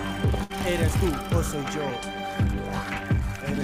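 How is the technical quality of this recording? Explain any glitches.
The recording has three glitches of two kinds.

From 0.43 to 0.52 s there is a burst of packet loss. About 60 ms of audio never arrived in time. The receiver filled the gap for 61 ms by holding the last sound and fading it down. Then the audio picks up further on, with that stretch gone.

At 0.92 s and again at 1.90 s the audio skips. A short piece, roughly 20 ms, is missing each time, and the two sides are joined directly with no silence. The cause is likely audio missing between chunks. The skips come about one second apart, which fits a recorder working in 1-second chunks and dropping a little at each handover.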